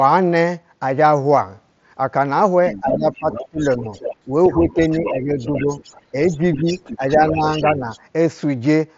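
From 2.72 s to 7.99 s a faint second voice runs under the speech, roughly 15 dB down; this is the other side's voice leaking through, likely loudspeaker echo the canceller failed to remove. Overlapping it, the main speech dips and thins at 2.74–3.92 s, 4.26–5.66 s and 6.12–7.9 s, by up to about 15 dB and then about 10 dB, for around 0.7 s each time. This is speech suppressed in double talk, likely the echo canceller turning down both voices while they overlapped. Throughout, the audio stops near 7.7 kHz, which fits the wideband Bluetooth mSBC headset codec.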